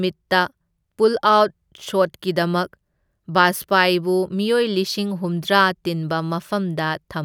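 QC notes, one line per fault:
No faults heard anywhere in this speech recording.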